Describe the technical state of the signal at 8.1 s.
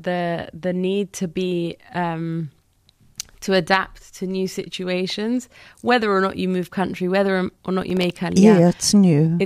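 At 8.1 s the speech is inside a burst of processor overload crackle running from 7.82 to 8.16 s. The processing fell behind over and over, so a string of very short buffers, which fits buffers of about 3 ms with around seven of them missed, came out late and were filled with stale audio. Each reused scrap joins the live signal with a hard edge, so a gritty tearing rides on the speech until the load eases. On a waveform this appears as abrupt steps and small repeated fragments. A spectrogram shows a cluster of thin vertical broadband lines across that span.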